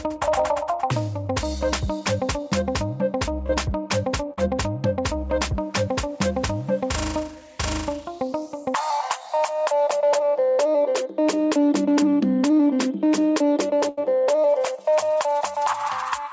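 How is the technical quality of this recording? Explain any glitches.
The recording has three dropout glitches from packet loss on a call link. The audio stops at 8 kHz. That fits a wideband call codec such as G.722 at around 64 kbps.

Short concealed packet loss occurs at 3.47 to 3.50 s and again at 4.33 to 4.38 s. About 20 ms and then 50 ms of audio arrived too late to be decoded. The receiver filled each hole by extending the last sound, as a pitched copy or shaped noise, then blended back. Each is heard as a brief smear or wobble, and a short sound may vanish.

A burst of packet loss follows at 13.89 to 13.98 s. Here about 80 ms of audio in a row was lost. The receiver again extended the last sound, fading it down as the gap went on. You hear a held buzz or fading hiss. The audio then picks up further along, with that stretch missing.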